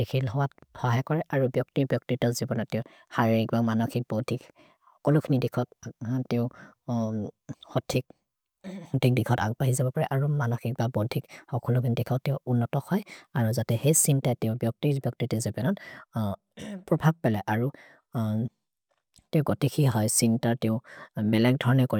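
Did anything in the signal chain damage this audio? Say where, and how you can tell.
No, nothing damaged this audio.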